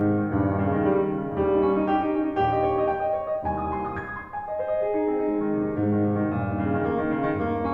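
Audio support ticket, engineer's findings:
Channel delay (comb filtering), whole clip. Music sounds hollow and phasey. One channel lags the other by roughly 10 ms before the mono sum, so shared content cancels at fixed, evenly spaced frequencies: first notch near 50 Hz, then about every 100 Hz. Spectrogram: stationary horizontal dark bands, unmoved by the music. Probable component: mixdown/summing stage or a misaligned channel buffer.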